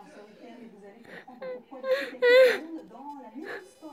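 From 2.29 s to the end at 3.93 s, a faint buzzing chirp sits under the sound. This is computer activity noise: load changes in the processor, graphics card or mouse disturb the ground shared with the audio circuit. It pulses at around 500 times a second, roughly 45 dB below the sound. Unlike steady mains hum, it arrives abruptly, follows the machine's workload rather than the audio, and has a scratchy, irregular texture.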